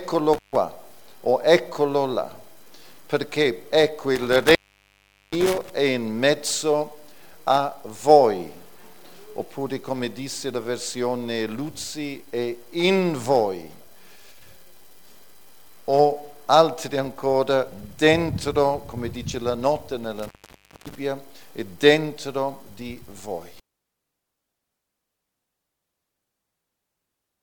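The sound drops out abruptly three times, each gap framed by crackle and leaving only faint hiss: from 0.33 to 0.56 s with about 0.14 s of silence, from 4.15 to 5.70 s with about 0.77 s lost, and from 20.19 to 20.95 s with about 0.57 s gone. This is intermittent contact. A loose cable or plug briefly opens the signal path, and the scraping connection crackles as it breaks and remakes.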